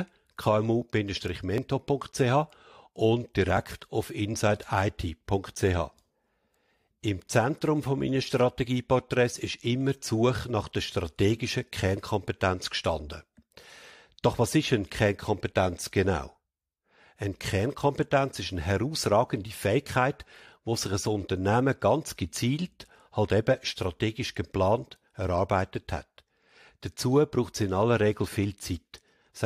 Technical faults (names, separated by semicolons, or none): overlap between stream segments